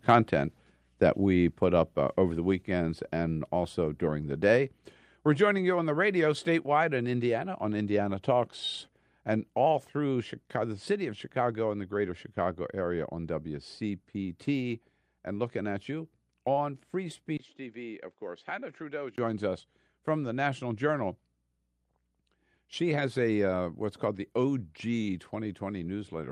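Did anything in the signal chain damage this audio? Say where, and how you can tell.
Yes. Call processing: at 1.5 s, between "that we" and "put up uh over", the microphone volume stepped down about 2 dB in one step, likely automatic input-gain reduction.

Driver or device stage: from 17.37 to 19.18 s the input switched to a poorer device, likely a fallback microphone. A 20 ms gap opens, the band narrows, level falls about 10 dB, and a new noise floor appears, ending before "us from the".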